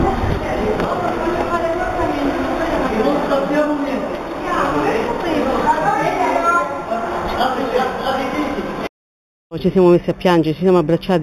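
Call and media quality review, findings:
Imaging from linear upsampling, throughout: dulled top end with faint metallic shimmer on sibilant and bright sounds. Points to an 8 kHz source raised to 48 kHz by straight-line interpolation. Spectrogram: a mirrored copy of the band in the 4 to 8 kHz region, about 25 dB below the signal.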